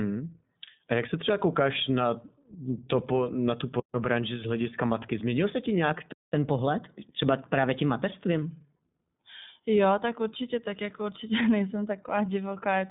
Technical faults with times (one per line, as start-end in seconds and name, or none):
0.00-12.90 iLBC codec
6.12-6.33 playback stall
6.33-8.42 catch-up at higher speed